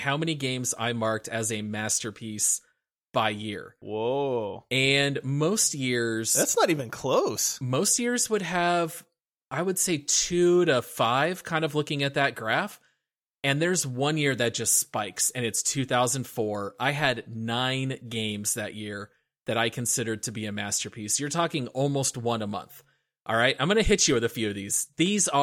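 Speech recording, with no technical faults to report. Nothing audible in it calls for a time or a cause.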